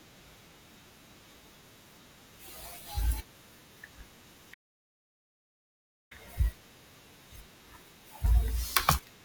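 Speech recording with a playback stall: the player likely ran short of buffered data or was blocked, so output drops to silence from 4.53 to 6.12 s, about 1.57 s, before resuming.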